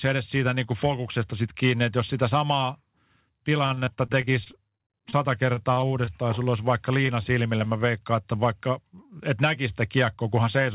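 From 3.58 to 5.14 s the speech breaks into repeated packet loss with a robotic sound. Sixteen short holes, the longest about 37 ms, are patched by extending the preceding waveform, so roughly 18 percent of the stretch is synthetic continuation. The effect is a choppy, robotic texture with fragments dropping out. After a brief clean gap, the same pattern returns from 5.54 to 6.11 s: five holes of up to 25 ms, about 16 percent of that span concealed, giving a shorter burst of the same mechanical quality.

Three isolated short concealed packet losses follow, at 6.44 to 6.48 s, 7.06 to 7.10 s and 7.58 to 7.62 s. In each, about 20 ms of audio failed to arrive in time and the decoder bridged it by carrying the last sound forward before crossfading back into the real signal. Each one is heard as a quick smear or wobble rather than a clean cut, and a brief consonant at those points can be lost.

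From 9.97 to 10.34 s a jitter buffer speed-up compresses the speech. The receiver had accumulated more buffered audio than its target and trimmed pitch-period-sized pieces in succession, removing around 40 ms in total and running the audio at about 109 percent speed. Pitch stays unchanged, but the phrase sounds rushed.

Throughout, nothing is present above 4 kHz, which points to a G.711-type narrowband call codec.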